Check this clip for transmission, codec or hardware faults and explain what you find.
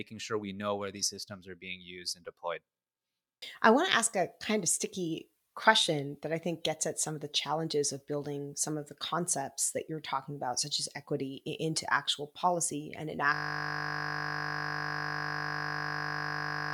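One hardware fault is present: a system hang loop starting at 13.34 s, just after "into actual policy and", and lasting to the end. The system stalled while the sound device kept replaying one 20 ms buffer about 170 times. That produces a steady 50 Hz buzz in place of the speech. A spectrogram shows evenly spaced horizontal lines at multiples of 50 Hz, and the waveform shows one identical 20 ms cycle repeating unchanged.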